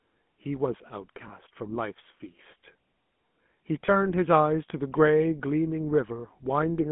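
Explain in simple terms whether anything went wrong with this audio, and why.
Two things went wrong. The first runs through the whole clip: it has been squeezed through the GSM full-rate codec, the original mobile phone codec. It doesn't store the sound itself. It stores a rough model of the throat and mouth and drives that model with a coarse pulse pattern, so the speech comes out buzzy and gravelly, and that roughness is plainly audible here. The sound also only covers about 150 Hz to 3.4 kHz, which is why it sounds thin, like a phone line.

The second is lost GSM frames, at 1.28 to 1.31 s and again at 3.86 to 3.89 s. Each gap is very short, which fits a single lost frame. When a frame goes missing, the decoder doesn't leave silence. It reuses the settings from the last good frame and plays them again. You hear that as a brief metallic, ringing smear at those two points instead of a clean dropout.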